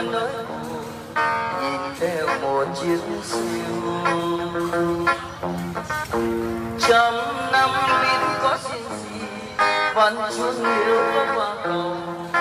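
Nothing stood out as a technical fault anywhere in the audio on listening.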